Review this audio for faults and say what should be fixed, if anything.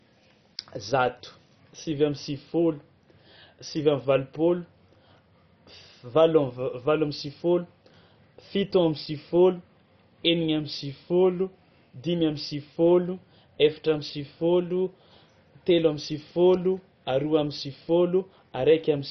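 The speech is dull and gurgling from start to finish, with a granular, watery distortion and nothing above about 6.1 kHz. This is likely MP2 compression at a very low rate, which fits roughly 32 kbps. With so few bits, MPEG Layer II switches off its upper sub-bands, so bands flicker in and out, and quantises the remaining bands coarsely. The damage is heavy. To prevent it, encode from the original source at a much higher bitrate or use a more efficient codec.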